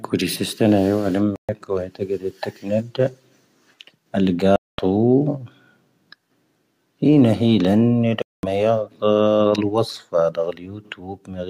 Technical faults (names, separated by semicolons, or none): digital broadcast dropout; playback stall